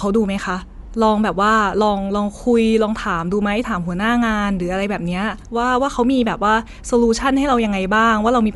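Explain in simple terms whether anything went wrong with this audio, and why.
Dolby Digital compression, most likely, affects the speech from start to finish. Squeezing the sound into too little data cut everything above about 11.4 kHz and replaced fine detail with filler noise, so it sounds dull, with a rough, fluttering edge.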